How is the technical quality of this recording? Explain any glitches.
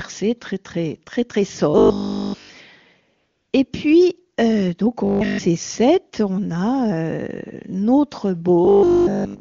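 The speech is marred by three stretches of robotic buzzing and one brief patch of comfort noise, carried over an AMR-WB HD Voice link whose top-rate coding adds little audible damage.

Robotic sound from repeated short buffers occurs at 1.7 to 2.5 s after "très très très très", at 5.05 to 5.39 s after "puis euh donc au", and from 8.65 s to the end. Almost all of the real audio is skipped, likely because buffers arrived too seldom, and a 20 ms chunk loops. This produces a rigid metallic 50 Hz buzz, seen as evenly spaced harmonics on a spectrogram and a repeating waveform period.

AMR comfort noise runs from 3.17 to 3.53 s, about 360 ms without speech frames. The real background gives way to smooth synthetic hiss, which appears as a flat, featureless band switching in and out.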